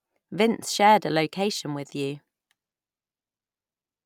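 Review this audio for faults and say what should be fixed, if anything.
There are no faults in this audio, so nothing needs to be fixed.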